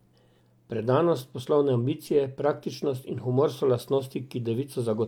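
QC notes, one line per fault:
No technical faults can be heard anywhere in the speech signal.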